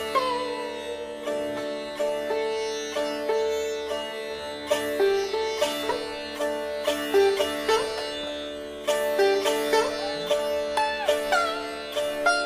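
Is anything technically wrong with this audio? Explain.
No, nothing technically wrong stood out on listening to this audio.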